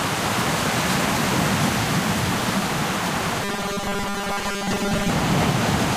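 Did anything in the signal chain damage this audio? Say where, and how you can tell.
Yes: robotic sound from repeated short buffers at 3.43–5.10 s, likely a buffer stage looping 5 ms blocks. A fixed 200 Hz buzz, not drifting codec warble, marks it.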